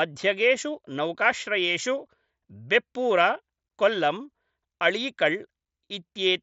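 The speech comes through the Bluetooth mSBC headset codec as expected, with its wideband limit near 8 kHz and a light grain on the louder sounds, and no technical faults occur anywhere in the signal.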